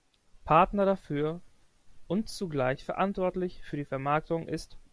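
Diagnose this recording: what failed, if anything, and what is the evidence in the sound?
Nothing in this speech recording points to a failure at any stage; there's simply no fault to diagnose here.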